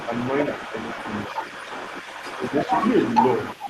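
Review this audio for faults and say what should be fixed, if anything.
Other side's voice leaking through, present throughout the clip: a second voice runs under the talker the whole time, only a little quieter, roughly 5 dB below the main speech. The likely cause is the talker's device playing the far end on a loudspeaker, with the microphone picking it back up and the echo canceller failing to subtract that returning signal. Prevention: have the talker use a headset, or retune the echo canceller so its model of the loudspeaker path converges and removes the return.

Speech suppressed in double talk, from 1.28 to 1.33 s and from 2.37 to 2.52 s: the talker's level briefly sags by around 5 dB while the leaked far-end voice is also active. When both sides overlap, the canceller likely cannot tell its own talker from the echo and ducks everything together. Prevention: fix the echo leakage above and use double-talk detection that holds back suppression while the near-end talker is speaking.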